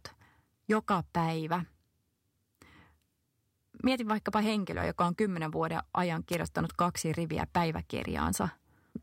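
At 6.31 to 6.36 s, between "on kymmenen vuoden ajan" and "kaksi riviä", a wireless microphone noise hit is heard as a brief swish or burst of static. The analogue FM radio link faded, letting receiver noise rise over the speech. On a spectrogram it shows as a narrow broadband smear.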